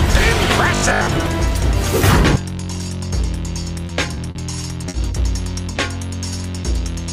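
Audio arriving too seldom was likely patched by replaying about half its 20 ms blocks, giving robotic sound from repeated short buffers: a rigid 50 Hz buzz from 0.75 to 1.13 s. Late packets emptied the jitter buffer, causing a short stall from a late packet at 3.87 s (20 ms), 4.15 s (20 ms), 4.31 s (40 ms) and 4.89 s (50 ms), each stretching the last sound with nothing lost while the delay grows.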